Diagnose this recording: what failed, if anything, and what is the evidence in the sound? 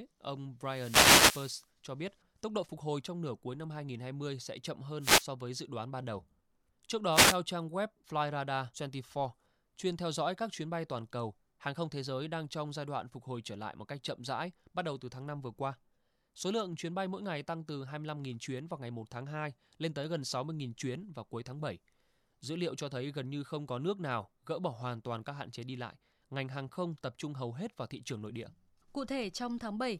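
The radio link of an analogue FM wireless microphone, ahead of the converter, produced wireless microphone noise hits from 0.63 to 1.67 s, 5.00 to 5.26 s and 7.10 to 7.38 s. As the carrier faded, receiver hiss swelled over the speech as short static bursts. A spectrogram shows broadband noise smears, and the waveform shows a thickened noise floor.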